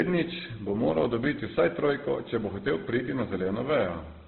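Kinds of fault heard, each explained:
Transcoding between lossy codecs: the whole clip sounds like it likely passed through a very low-rate codec such as 12 kbit/s Opus and then into WMA, so two flavours of smearing stack up, and nothing survives above 4.3 kHz, leaving the speech dull and band-limited.
Timecode bleed: from 1.46 s to the end there's a faint chirping warble, sitting about 35 dB below the speech, flipping between tones near 1 kHz and 2 kHz. That's linear timecode leaking in from a nearby track or cable, running at the 29.97 frames per second rate.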